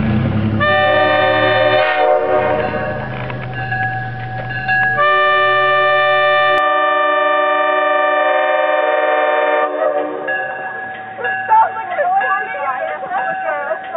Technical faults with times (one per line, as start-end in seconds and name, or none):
6.58-13.97 input switched to a poorer device